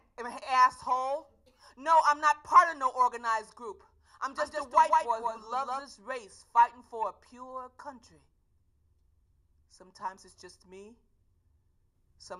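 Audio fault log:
4.37–5.81 s doubled audio track: a second, slower capture path or an out-of-step edit likely mixed the same audio in twice. A full-band copy trails about 150 ms behind, about 5 dB quieter, with no decay or room colour, and starts and stops abruptly.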